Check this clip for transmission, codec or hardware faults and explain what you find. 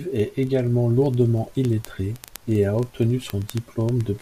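One fault is present: word clock ticks. From 0.12 to 4.20 s, sharp ticks recur roughly every 40 ms. An unlocked receiver clock slips one sample per tick, drawing thin vertical spectrogram lines.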